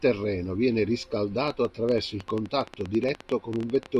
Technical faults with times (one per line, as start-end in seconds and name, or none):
1.48-3.98 train of clicks